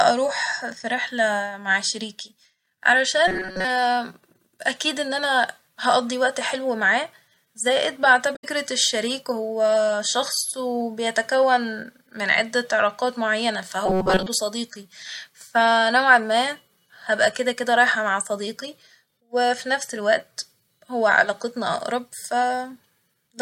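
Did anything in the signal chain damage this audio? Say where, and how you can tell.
Yes, two kinds of damage. The first is robotic sound from repeated short buffers, heard at 3.28 to 3.65 s and again at 13.86 to 14.26 s, after "عدة علاقات معينة" and before "صديقي ف". The speech becomes a rigid metallic buzz at 188 Hz. That is the pitch you get from looping a slice of about 5.3 ms while most of the real audio in those spans is skipped. The likely stage is a starved driver or playback buffer. What sets it apart from codec damage is a steady imposed pitch lasting a few hundred milliseconds, not a single blip.

The second is damaged data in a compressed stream, at 8.32 to 8.44 s, between "وقت حلو معاه زائد" and "الشريك هو شخص وبيتكون". It is a brief disruption of about 120 ms where the decoder hit corrupt frames, lost sync and jumped ahead to the next valid frame header. This points to the codec, storage or network stage rather than buffering. 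It has no sustained fixed-pitch buzz, just one short disruption.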